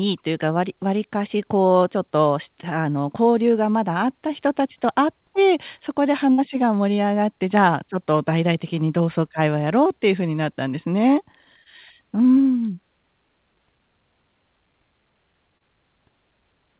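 Speech carried over a narrowband call path, with nothing above 4 kHz, which fits a G.711 A-law link at 64 kbps, and three dropouts. The largest is a burst of packet loss from 6.32 to 6.40 s. About 60 ms of audio never arrived, and the receiver stretched the last sound across the hole while fading it down. That produces a held buzz or hiss, and the speech resumes slightly further on with that stretch missing. What separates it from the other two is length. At roughly two to three times their duration, the fill is long enough to hear as a sustained, decaying sound rather than a blip. The other two are short concealed packet losses at 11.64 to 11.68 s and 15.58 to 15.62 s, each losing about 20 ms. Here the gap is bridged by continuing the preceding pitch or noise and blending straight back, so each shows up only as a brief smear or wobble in the speech.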